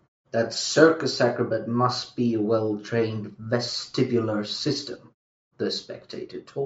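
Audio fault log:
Nothing to log for this speech clip; the only thing you'll notice is the usual call-style microphone processing, with the quiet stretches going silent between phrases.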